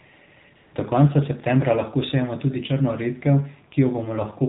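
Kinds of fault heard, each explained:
AMR narrowband mobile codec: The speech passes through a 2G/3G phone codec at a low rate that fits 7.4 kbps, plainly audible as buzzy, synthetic tone. A spectrogram shows everything above 4 kHz gone, with a hard ceiling across the whole clip.
AMR comfort noise: From 0.56 to 0.74 s, about 180 ms, real audio is swapped for smooth synthetic noise while no speech frames arrive. On the waveform it appears as a flat, even band; the spectrogram shows featureless, uniform noise switching in and out.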